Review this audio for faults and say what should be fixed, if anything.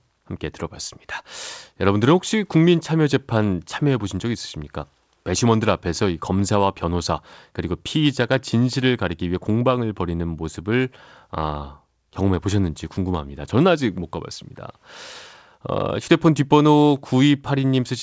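No faults found here; nothing needs fixing.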